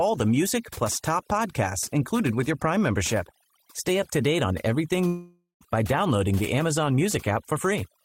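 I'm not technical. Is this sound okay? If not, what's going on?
No. There are two problems.

The first is overdone noise removal, and it runs through the whole clip. A noise-cleaning tool was set far too strong. It switched off narrow slices of sound wherever they resembled background hiss, and it took quieter parts of the speech with them. The background drops away and breaks up into twinkling specks.

The second is a long network dropout from about 5.07 s to 5.63 s, just after "to date on everything". For about half a second the sound turns into a fading buzz or hiss and then goes nearly quiet. The speech returns at "by downloading the", but roughly 0.54 s of it is gone for good. This was likely caused by the connection briefly losing the incoming audio, and the player filled the gap with leftover sound.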